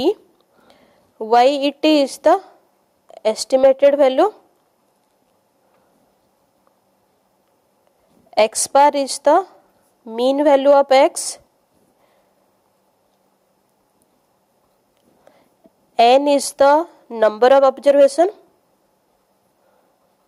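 Gain pumping runs throughout: the gain swings around 5 dB, likely from excess gain feeding a fast limiter.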